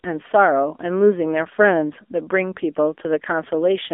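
Throughout, the speech passed through the AMR narrowband mobile codec at a low rate, near 7.95 kbps by ear, leaving a buzzy, synthetic 250 Hz to 3.5 kHz band with nothing above 3.7 kHz.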